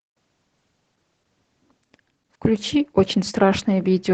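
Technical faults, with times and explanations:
Throughout, Opus voice compression: the speech has that muffled, slightly hoarse, faintly robotic quality you get when Opus squeezes voice hard, and the damage is plainly audible. Everything above about 8 kHz is gone, which points to the SILK coder running in wideband mode at a low rate, something like 12 kbps. At that rate the excitation is coded coarsely in 20 ms chunks, so the voice comes out hoarse and slightly robotic.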